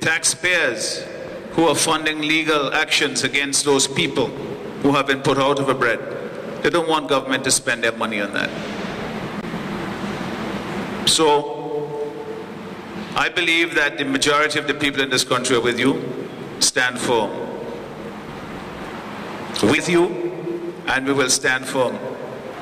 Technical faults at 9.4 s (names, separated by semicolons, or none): CD skip